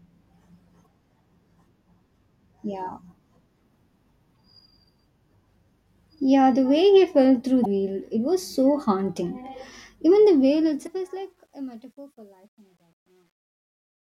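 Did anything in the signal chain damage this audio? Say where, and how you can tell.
Yes. Damaged data in the compressed stream (storage or transmission) causes short glitches about 40 ms long at 0.82, 4.33, 7.62 (just before "it was so haunting") and 10.83 s, each where the decoder lost sync.

The closing fade-out shows truncation distortion from 10.21 s. An undithered fade stage turns gritty, worst from 11.8 s to the end, which fits a 10-bit word length.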